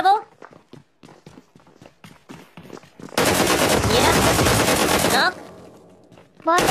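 Nothing in the audio stood out as a technical problem on listening.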